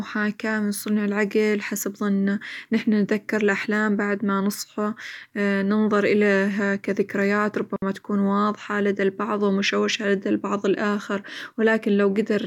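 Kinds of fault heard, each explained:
Digital wireless dropout: the receiver mutes for 60 ms at 7.76 s, leaving a clean, near-silent gap with no noise burst, unlike an analogue dropout's hiss.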